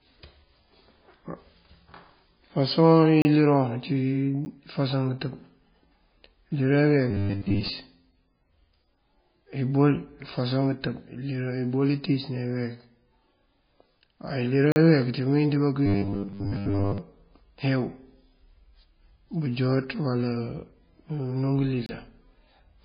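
The speech in this clip has a dull, watery quality throughout, with nothing above 5 kHz and swirling, chirpy sibilants. That is heavy MP3 compression, likely at a bitrate near 16 kbps. Unlike the other faults here, it never comes and goes: the treble is cut off at a fixed frequency and weak components flicker between frames for the whole length. There is no rhythmic pitch or momentary gap, only a constant smeared, bandlimited texture. Four blocks of digital silence cut the sound dead and bring it back with no fade. The first runs from 3.22 to 3.25 s (30 ms), just before "iliroŋ ací". The second is a 10 ms tick at 4.45 s, right after "iliroŋ ací". The others run from 14.72 to 14.76 s (40 ms) and from 21.86 to 21.89 s (about 27 ms). A gap from lost packets is often smoothed over or faded, but these drop to silence with hard edges, which points to an output buffer that was not filled in time. 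Robotic sound from repeated short buffers covers 7.11 to 7.69 s and 15.86 to 16.98 s, the second stretch starting after "ţí mëwín ţí bá". During both, the sound turns into a rigid metallic buzz locked at 100 Hz while still loosely following the speech. The likely cause is a 10 ms chunk being replayed in place of most of the real audio. Codec swirl has no fixed pitch, and that steady 100 Hz buzz is what separates this fault from the compression damage.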